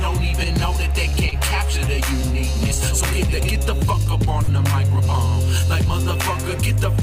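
Three short stalls from a late packet occur, at 1.09 to 1.16 s, 1.29 to 1.35 s and 4.43 to 4.51 s. Each time a packet missed its slot, the jitter buffer ran dry, and the receiver stretched the last sound to cover the wait before resuming where it left off. The fill lasts 41 ms, 29 ms and 48 ms, and nothing is lost, but each moment sounds held too long, and playback falls later by that amount.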